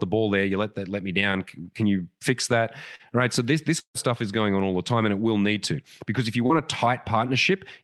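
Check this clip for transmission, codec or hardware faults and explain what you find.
Three network faults are audible in this speech.

Short concealed packet loss, 2.95 to 3.02 s after "can you fix that" and 6.46 to 6.52 s after "to because if you": about 40 ms arrived too late, and the receiver extended the preceding sound to fill it, leaving a brief smear.

Burst of packet loss, 3.79 to 3.97 s, between "right so this this" and "stuff is going on": about 160 ms went missing. The concealment stretched the last sound for 150 ms while fading it, leaving a held tail, a 90 ms silence, then a jump forward.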